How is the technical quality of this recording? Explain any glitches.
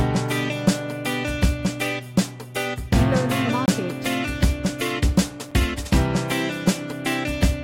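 The recording has two dropouts where the audio falls to digital silence. These are blocks of digital silence, one from 3.66 to 3.68 s (about 21 ms, which fits a 1024-sample buffer) and one at 5.51 s (about 7 ms). Each time, a run of samples was replaced by zeros, most likely because the output buffer was not filled in time. The longer gap sounds like a brief hole and the shorter one like a tick.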